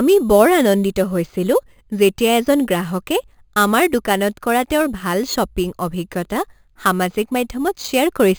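Speech with a bright metallic fizz riding on the voice throughout, about 18 dB below it and concentrated around 5.5 to 11 kHz, which is imaging from sample-and-hold upsampling: held samples without smoothing mirror the spectrum, which fits a source near 11 kHz raised to 48 kHz.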